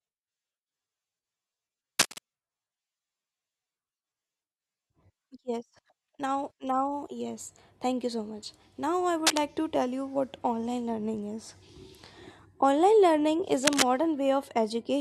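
Cable scratch noise appears at 1.98 to 2.19 s, 9.27 to 9.44 s and 13.64 to 13.83 s, just after "learning is". Each is a dense, ragged rustle roughly as loud as the speech, likely from a worn connector being moved. It lasts about a fifth of a second, unlike an isolated click.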